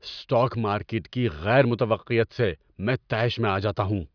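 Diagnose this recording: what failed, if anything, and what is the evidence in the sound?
Nothing in the chain audibly failed: the speech signal holds steady, with no dropouts, discontinuities or level anomalies at any point, so no stage shows evidence of a fault.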